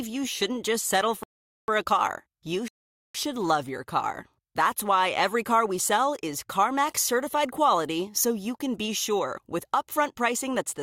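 At 1.23 s the speech drops abruptly into silence, then picks up at 1.68 s exactly where it left off. The same happens again from 2.68 s to 3.15 s. Each gap adds just under half a second and skips nothing. These are rebuffering stalls: the player used up the audio it had downloaded and paused until more data arrived, so playback froze in place and then continued from the same point.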